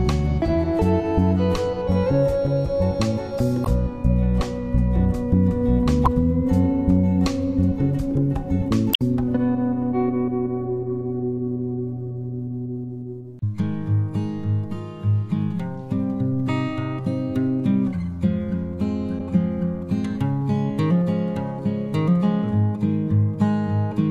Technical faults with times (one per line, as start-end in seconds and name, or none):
3.62-3.67 damaged data in a compressed stream
6.03-6.08 damaged data in a compressed stream
8.91-9.02 damaged data in a compressed stream
13.39-13.43 damaged data in a compressed stream
19.16-19.21 damaged data in a compressed stream